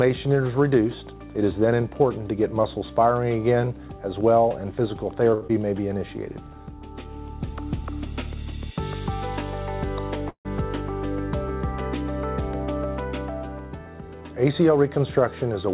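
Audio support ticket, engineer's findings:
Short stall from a late packet, 5.34–5.43 s: last sound held 74 ms with a faint buzz or dip, then resumes with nothing dropped. Jitter buffer ran dry waiting. Unlike the loss that follows, content intact, delay up 74 ms.

Short concealed packet loss, 5.47–5.51 s: brief smear or wobble, 40 ms of audio gone, only 18 ms synthesized from preceding sound. Decoder concealment. Differs from stall: material actually missing, timeline shortened, delay down about 20 ms.

Call audio freeze, 10.29–10.47 s: 156 ms inserted, sound fades to roughly 90 ms silence, then continues where it stopped. Likely packets delayed in transit, buffer underrun. Longer than the 5.34 s stall, and it decays to silence rather than holding.

Jitter buffer speed-up, 13.78–14.77 s: audio runs at 114% speed with pitch unchanged and sounds hurried. About 150 ms trimmed in repeated pitch-period cuts. 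Buffer draining excess delay. Steady pitch rules out a resampling fault.

Call path: band limit at 4 kHz and coding noise consistent with G.711 A-law.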